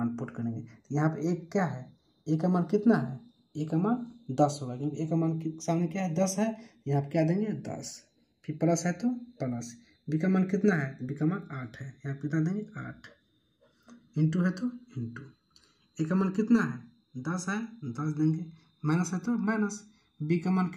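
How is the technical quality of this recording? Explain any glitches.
Throughout the recording a slow flanging sweeps through the sound: channels drifting apart. The two channels were captured on separately clocked devices, roughly 40 ppm out, so their offset grows to about a millisecond, and summing them moves comb-filter notches gradually across the spectrum.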